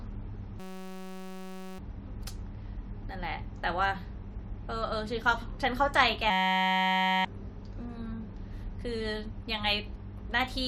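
At 0.60 to 1.79 s and again at 6.30 to 7.25 s, the speech gives way to a system hang loop. The system stalled while the hardware replayed one 5.33 ms piece, consistent with a 256-sample buffer. It sounds like a steady 188 Hz buzz, and about a second of audio is lost each time.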